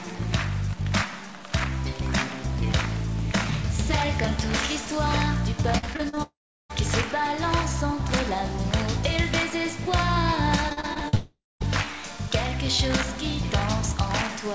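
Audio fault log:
Throughout: stuck bit. A distortion rides on the whole clip, and quiet moments fill with noise instead of falling silent. The likely cause is one data bit held at a fixed value, so about half the samples are shifted by that bit's weight in a pattern set by the waveform. Packet-loss artefacts come and go in bursts, but this grit stays constant and follows the signal, even through pauses.
5.78–6.18 s and 10.69–11.15 s: repeated packet loss (robotic sound). Each stretch has six short holes, the longest about 47 ms and 42 ms, each patched by stretching the last sound. The sound turns choppy, with pieces missing. About 41% and 33% of each span is concealed fill. Unlike a dropout, real audio keeps returning between the holes, so the effect is a rapid stutter rather than one fade.
6.22–6.71 s and 11.15–11.62 s: long network dropout. Each follows straight after a burst of packet loss. 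About half a second of audio is lost, likely from a longer break in delivery. The receiver extends the last sound as a buzz that fades, then leaves roughly 0.35 s and 0.2 s of near-silence before the sound resumes further on. That single fade into quiet sets it apart from the repeated stutter just before it. Throughout, the call path's G.722 coding leaves nothing above 8 kHz.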